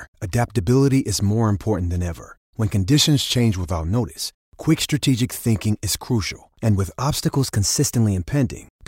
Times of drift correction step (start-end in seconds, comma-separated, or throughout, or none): 2.93-3.79, 7.25-8.26